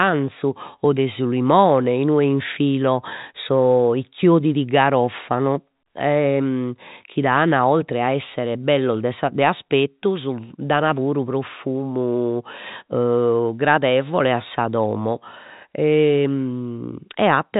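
Nothing stood out on listening to this speech, which carries the narrow band of ordinary G.711 telephone coding with nothing heard above about 4 kHz.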